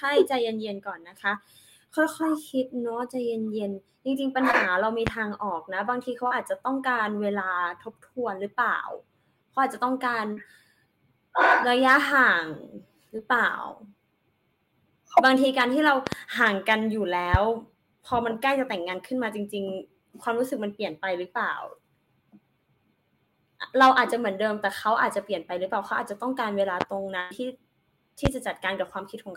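At 4.51 s the speech briefly smears. This is short concealed packet loss: about 20 ms of audio never arrived in time, so the receiver extended the preceding sound for roughly 16 ms and blended back. The same smear or wobble recurs at 6.27 to 6.33 s and 10.33 to 10.39 s, where about 40 ms went missing, and again at 13.17 s for about 20 ms. Unlike a pop, nothing is added on top. The sound just stretches or goes briefly vague.

At 5.07 to 5.10 s a loud pop cuts through, peaking around 20 dB above the speech, which carries on underneath it without interruption. A sudden voltage step or pulse, likely from a connector, switch, static discharge or driver glitch, entered the signal chain. Further single pops follow at 17.34 to 17.37 s, 26.81 to 26.84 s and 28.26 to 28.29 s, and a double pop at 16.07 to 16.15 s. These are sharp, intrusive events, not smoothed gaps.

At 27.20 to 27.32 s there is a burst of packet loss. 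About 100 ms of consecutive audio was lost, and the concealment held the last sound while fading it, producing a short buzz or hiss. The speech then resumes further along, with that stretch missing. Its greater length and the audible fade set it apart from the brief smears earlier, which blend back into the speech.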